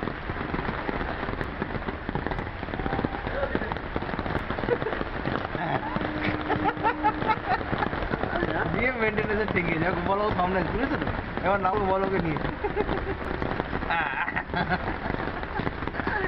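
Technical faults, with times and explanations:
0.98, 5.57, 8.47 and 11.72 s, damaged data in a compressed stream: each is a brief chirp or blip. Part of the compressed stream is corrupted there, so the decoder misreads those frames, loses sync, and hunts for the next good frame header before carrying on.
1.44, 4.39, 7.34, 10.30 and 13.25 s, audio missing between chunks: skips about 3 s apart, each dropping roughly 50 ms with the two sides butted together. That spacing likely comes from a recorder working in 3 s chunks and losing a sliver at every handover.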